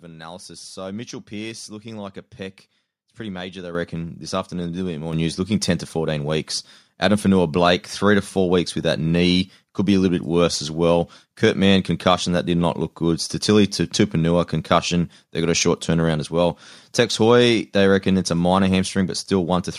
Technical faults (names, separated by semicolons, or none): microphone volume stepped up